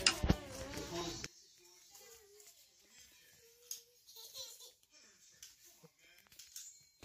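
From 1.26 s to the end, the sound drops by about 22 dB and turns faint, likely one channel inverted, cancelling the shared centre when summed to mono. There's a small skip at 2.01 s and again at 5.98 s, an overlap between stream segments trimming about 12 and 6 milliseconds away.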